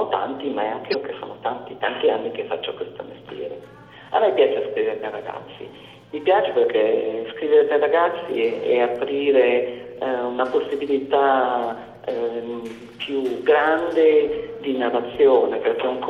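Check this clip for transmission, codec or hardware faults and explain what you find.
One fault stands out, near the start. From 0.90 to 0.95 s there is damaged data in the compressed stream. For about 44 ms, some bytes in the encoded stream are wrong. The decoder cannot read those frames properly. It loses its place and hunts for the next valid frame header before playback steadies. The result is a brief chirp or squawk that breaks into the sound, lasting only a few hundredths of a second.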